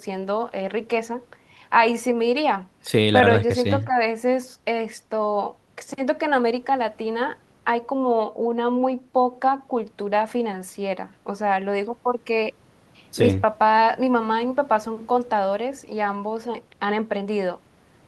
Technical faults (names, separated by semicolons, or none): none